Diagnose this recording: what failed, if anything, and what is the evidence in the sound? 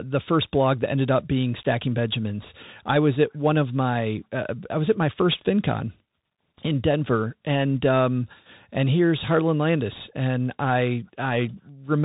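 Codec stage: the Bluetooth CVSD headset codec runs throughout. Nothing passes above 4 kHz. Sibilants turn scratchy over granular hiss, fitting one-bit delta coding at about 64 kbps.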